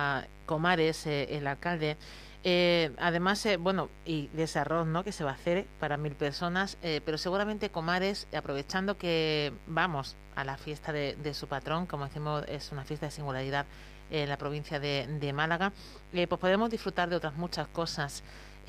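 Mains buzz runs through the whole speech recording. Sharp switching spikes, twice per 50 Hz cycle, leaked in through a dimmer, rectifier or unshielded path, spraying harmonics up to several kHz. It sits roughly 20 dB under the speech as a steady, raspy buzz.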